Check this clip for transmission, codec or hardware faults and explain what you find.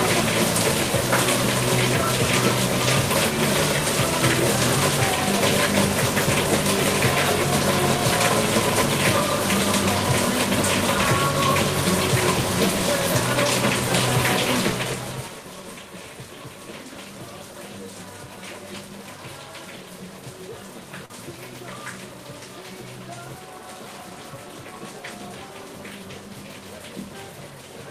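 One transmission fault turns up, a short concealed packet loss at about 21.05 to 21.10 s. About 40 ms of audio never arrived in time, so the receiver extended the preceding sound and blended back, leaving a brief smear. On a spectrogram that patch shows smoothed, repeated-looking texture with softened transients; in the waveform, a short stretch looks unnaturally regular.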